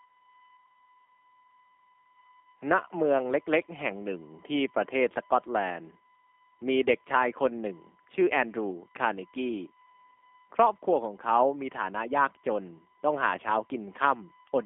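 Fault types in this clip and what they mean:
USB whine: a steady 1 kHz tone from USB frame-rate current leaking through power or ground, sitting about 35 dB below the speech; spectrogram shows an unbroken horizontal line.
G.729 codec: low-bitrate VoIP coding at 8 kbit/s leaves the speech plainly rough and synthetic, confined to roughly 250 Hz–3.5 kHz, with nothing visible above 3.6 kHz.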